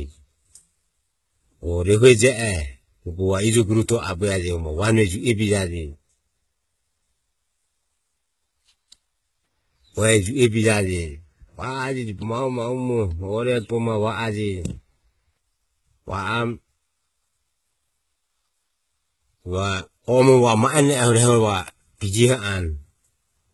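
Throughout, s sounds turn gritty and metallic and nothing reaches above 11.8 kHz, likely heavy HE-AAC compression faking the treble by copying lower bands upward.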